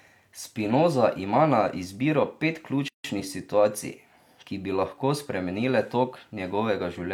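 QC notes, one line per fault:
2.88–3.04 s, gap at a join of encoded pieces: a 160 ms gap with smeared edges after "ima na izbiro pet", left by untrimmed encoder delay and end padding.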